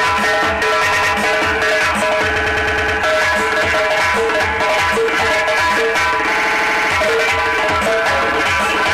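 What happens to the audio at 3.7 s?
Nothing goes wrong at 3.7 s; the audio plays through that moment intact, with no dropout, click, distortion or other fault.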